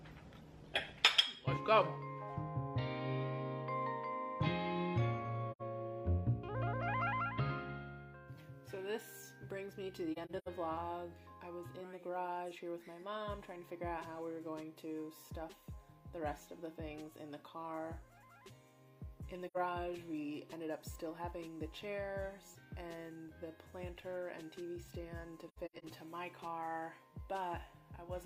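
AAC frame loss with muting occurs at 5.51, 10.12, 19.47 and 25.48 s. The decoder zeroed the spectrum of the missing frames, and the overlapping windows fade the sound out and back in. The result is a soft-edged hole. Each hole at 5.51 and 19.47 s lasts about 85 ms. At 10.12 and 25.48 s, several brief gaps scatter across 0.34 s, the longest about a tenth of a second.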